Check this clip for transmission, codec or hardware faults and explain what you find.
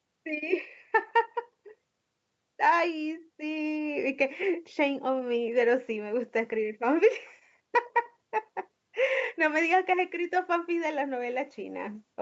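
No transmission faults found.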